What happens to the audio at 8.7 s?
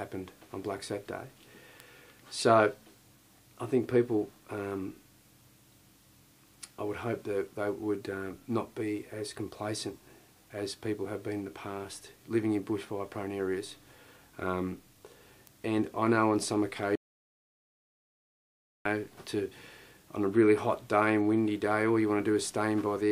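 Nothing goes wrong at 8.7 s; the audio plays through that moment intact, with no dropout, click, glitch or other fault.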